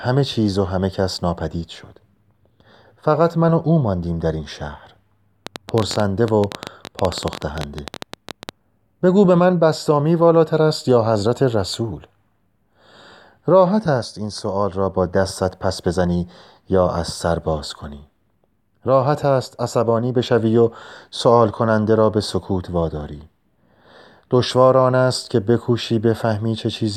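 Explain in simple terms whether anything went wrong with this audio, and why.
From 5.47 to 8.50 s there's a train of clicks: roughly forty uneven ticks, about 13 a second, likely from interference or a faulty connection.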